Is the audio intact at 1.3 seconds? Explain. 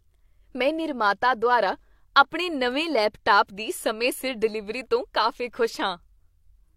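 Yes, at 1.3 seconds the speech runs on cleanly, with no dropout, click, distortion or other fault to be heard.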